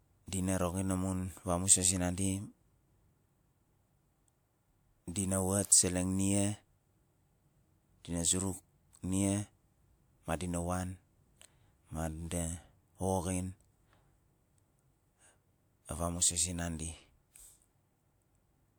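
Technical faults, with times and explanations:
5.67 to 5.72 s, pre-echo: a transform codec spread the quantisation noise for one block evenly across its full length, and the sharp onset just before "seleng nia" sat late in that block. Noise scaled for the loud attack therefore also landed in the quiet stretch ahead of it, so a brief hiss of about 47 ms runs in before the onset arrives, and the attack itself sounds softened and smeared rather than crisp.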